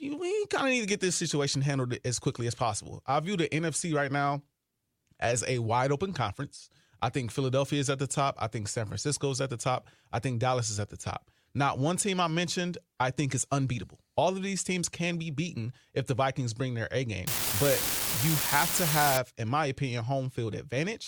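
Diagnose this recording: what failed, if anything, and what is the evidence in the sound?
A marginal converter data line left one bit unreliable from 17.27 to 19.17 s, adding identical spikes of about -18 dBFS: a steady crackle ending before "in my opinion".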